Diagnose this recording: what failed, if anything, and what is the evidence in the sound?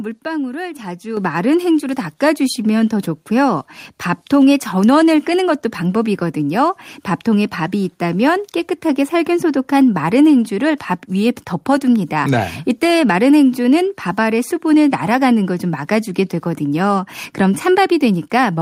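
Microphone volume stepped up twice, at 1.17 s by about 8 dB and at 2.19 s by about 2 dB. Call-processing gain control raised the input level, lifting speech and background together.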